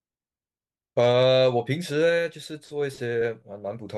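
No technical faults are audible.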